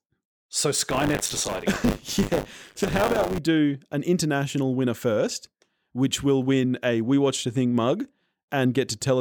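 Buffer tearing runs from 0.88 s to 3.38 s, ending just before "do an international winner". The writer and the hardware reader have slipped and cross inside each period, so about a fifth of each buffer replays speech from roughly 40 ms earlier, with hard joins on both sides. The result is a robotic 100 Hz buzz, which fits a 10 ms buffer period.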